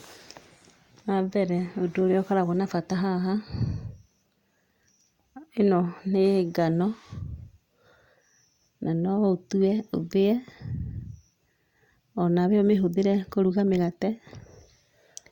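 No technical faults can be heard anywhere in this speech recording. Nothing in it needs a time or a value flagged.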